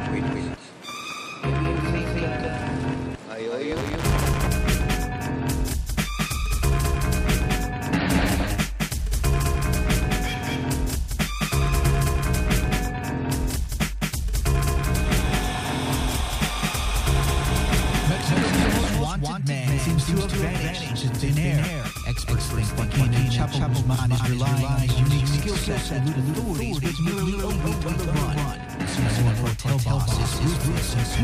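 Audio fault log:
Throughout: doubled audio track. Every sound arrives twice, the second copy trailing the first by about a fifth of a second and at roughly the same loudness, so onsets stutter into a flat, slapback-like echo with no decay or room colour and the full frequency range intact. The likely cause is the same audio being mixed in a second time, either captured again through a slower path or held as two out-of-step copies in an edit.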